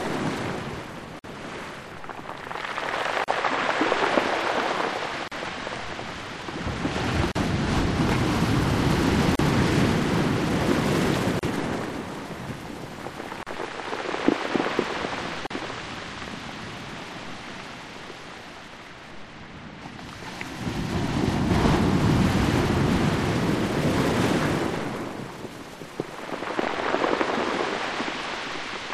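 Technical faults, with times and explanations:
1.19, 3.24, 5.28, 7.32, 9.35, 11.39, 13.43 and 15.47 s: gap at a join of encoded pieces. The sound drops into a brief silence every 2 s, 50 ms at first and 38 ms after that, then resumes where it stopped. Each piece was encoded on its own, so its start delay and end padding were left in at the joins.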